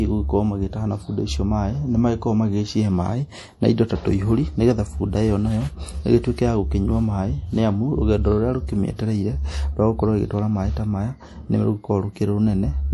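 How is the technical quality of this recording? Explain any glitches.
The quality is poor, with plainly audible codec damage throughout. Nothing reaches above 11.5 kHz, and the speech sounds watery and swirly. This is likely MP3 compression, consistent with roughly 48 kbps. Starved of bits, the encoder cuts the treble and switches weak frequency lines on and off.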